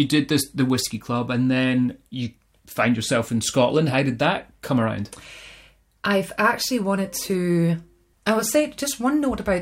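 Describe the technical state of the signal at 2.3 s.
At 2.3 s the speech signal is intact, with no audible dropout, distortion or other fault at that moment.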